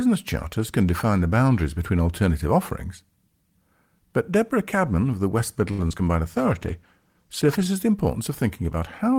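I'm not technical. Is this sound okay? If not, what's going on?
No, there's a rough patch in the middle of this call recording, roughly from 5.7 to 7.7 seconds.

First, at 5.71 to 5.82 s, you get a short stall from a late packet. One chunk of the call arrived late, so the receiving end had nothing new to play. It stretched the last bit of sound for about 70 milliseconds until the chunk turned up, then carried on where it left off. Nothing is lost, but the speech hangs for a moment and may buzz or dip slightly.

Right after that come two bits of short concealed packet loss, at 5.87 to 5.92 s and 5.98 to 6.01 s. Each time, about 20 milliseconds of the call never arrived. The receiver covered the gap by continuing the sound it had just played, then blended back into the real audio. You'd hear a tiny smear or wobble, and a quick consonant could drop out.

Then, from 6.27 to 7.73 s, there's a call bitrate drop. 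The connection seemed to get tighter, so the call squeezed the audio into far less data, sitting at its lowest for about 1.4 seconds. The speech turns rougher and more muffled or watery in that stretch, then sharpens up again once the connection recovers.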